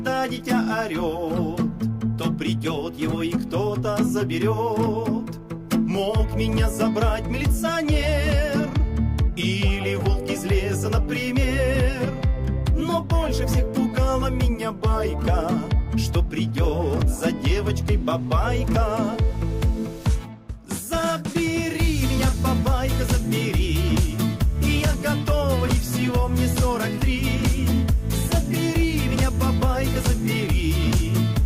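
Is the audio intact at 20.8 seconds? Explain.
Yes, at 20.8 seconds the audio is intact, with no dropout, click, distortion or other fault at that moment.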